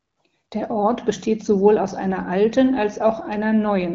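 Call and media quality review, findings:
No findings in this call and media quality review: the speech comes through an AMR wideband (HD Voice) codec path at 12.65 kbit/s with no faults heard.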